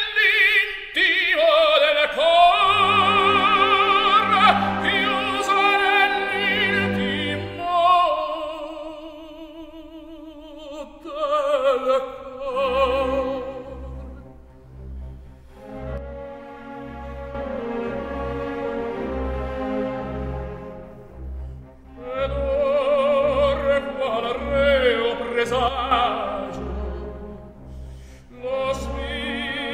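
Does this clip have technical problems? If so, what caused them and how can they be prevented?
Yes. Two sudden gain jumps occur: from 15.98 s to 17.35 s and from 25.68 s to 25.91 s, the level drops by about 7 dB and then returns. The background noise falls and rises along with the sound, and the steps are instantaneous rather than faded. The likely cause is a gain change or bit shift applied from one sample to the next without a ramp. Prevention: apply every gain change through a short smoothing ramp instead of switching it on a single sample.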